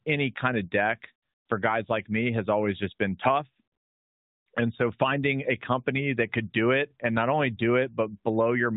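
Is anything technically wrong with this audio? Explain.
No, the speech comes through an AMR narrowband mobile codec chain working as intended, with a band that stops at 4 kHz and only the light coding character that fits the codec's top 12.2 kbps mode.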